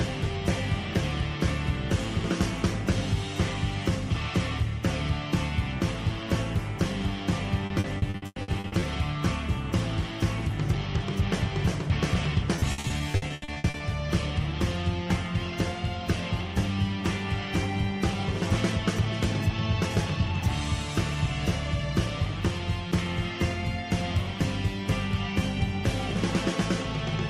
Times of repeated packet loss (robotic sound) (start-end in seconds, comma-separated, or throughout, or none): 7.66-8.84, 12.56-13.82